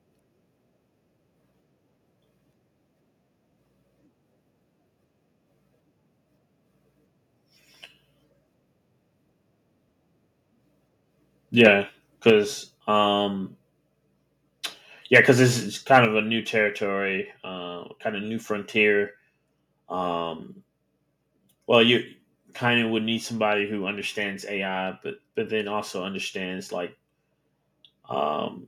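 Harsh, crackling peaks at 11.59–11.67 s, 12.28 s, 15.15–15.18 s just before "because this is", and 15.93–15.98 s before "of a new territory" are likely microphone overload, with tops flattened about 1 to 3 dB past the converter's limit. Immediately after, at 12.3 s and 16.05 s, voice and background drop abruptly by about 4 dB and 5 dB. This is likely the microphone volume stepped down by the call software in response to the clipping.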